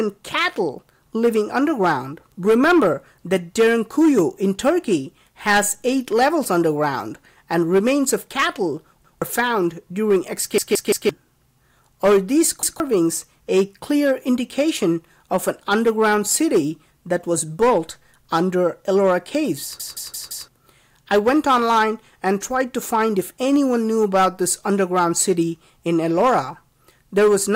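Hard clipping runs throughout. Peaks overdrive the signal by about 3 dB and are cut flat, adding crackle on loud moments.

Repeated buffers hit at 9.05, 10.58, 12.63 and 19.80 s. A 171 ms chunk, fitting an 8192-sample buffer, replays up to four times, stuttering.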